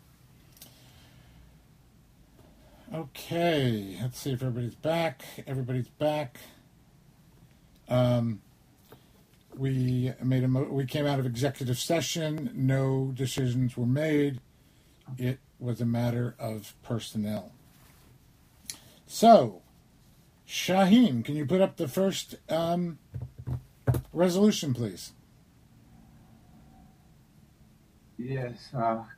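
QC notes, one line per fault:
12.38–17.37 s: periodic USB or driver dropouts. The audio path stalls every 1.00 s. About 2 ms is skipped each time, heard as regular ticks.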